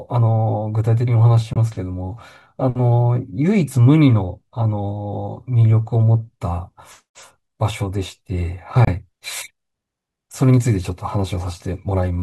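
At 1.53 to 1.57 s and again at 8.85 to 8.89 s the speech drops to silence for about 23 ms. These are likely Bluetooth dropouts: the wireless link to the headphones failed to deliver audio in time, consistent with one lost packet each time. What sets this apart from a buffer underrun is the resumption. The speech picks up as though it had kept playing, so a slice is skipped rather than paused and continued.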